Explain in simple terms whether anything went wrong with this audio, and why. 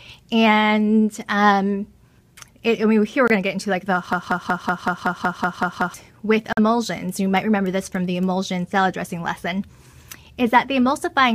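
A couple of things went wrong. At 3.28 to 3.31 s and again at 6.53 to 6.59 s, the sound drops abruptly into silence. That's corrupt frame muted: damaged chunks of the compressed file got rejected by the decoder, which fits a couple of frames each time, and the player filled the gaps with silence.

From 4.13 to 5.94 s you get a broken-record loop. A snippet about 0.19 s long repeats back to back, ten times over. Something in the chain likely stalled and kept replaying the last bit it had, so whatever should have played there is gone.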